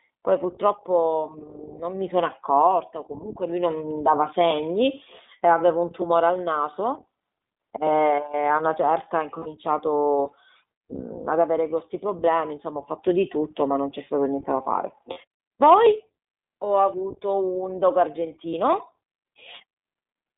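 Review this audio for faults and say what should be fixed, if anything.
iLBC codec, throughout the clip. The speech is confined to a telephone band of roughly 200 Hz to 3.7 kHz, so sibilants and breathiness above that are gone, and the voice has a plainly audible rough, slightly synthetic edge. That comes from coding each 20 ms frame's excitation independently at a low rate, which fits iLBC's 15.2 kbps mode. To prevent it, use a wideband codec such as Opus at a higher bitrate.

Lost iLBC frames, at 5.26 to 5.29 s (20 ms), 9.38 to 9.47 s (80 ms) and 15.12 to 15.18 s (40 ms). Each gap is filled by the decoder repeating the last pitch period blended with noise, heard as a briefly held, buzzy vowel. The 80 ms gap is the longest and fades as the concealment runs on. Because iLBC frames don't depend on earlier ones, the speech snaps back cleanly right after each gap. The lengths fit whole 20 ms frames going missing. 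To prevent it, reduce packet loss on the network or add forward error correction and a jitter buffer.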